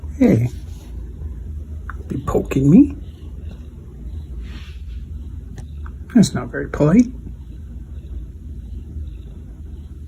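No technical faults are audible anywhere in the audio.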